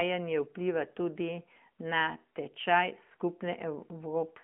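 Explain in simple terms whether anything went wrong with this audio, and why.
Yes. The speech went through an AMR narrowband mobile codec, the phone-call codec, for the whole clip. It keeps only about 200 Hz to 3.4 kHz, with nothing above 3.5 kHz, and rebuilds the voice from a simple model, so it sounds muffled, buzzy and noticeably synthetic.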